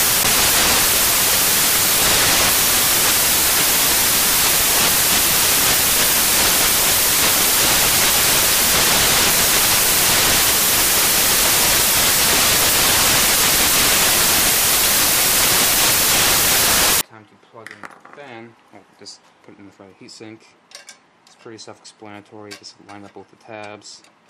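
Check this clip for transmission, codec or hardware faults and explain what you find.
One fault is present. From 0.0 to 17.01 s, the samples are built from the wrong bytes. The reader misassembles each sample's bytes. The rapidly changing low bits become the dominant part of each value. The result is loud, harsh broadband noise, close to white on loud sounds.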